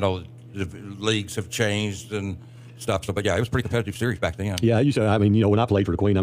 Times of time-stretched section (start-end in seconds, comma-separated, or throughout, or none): 2.48-6.23